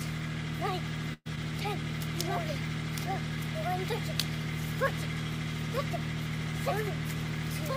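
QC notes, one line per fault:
1.13–1.27 s, burst of packet loss: a run of packets went missing, so the last sound gets stretched and faded for 120 ms, then goes briefly silent before resuming with a chunk skipped.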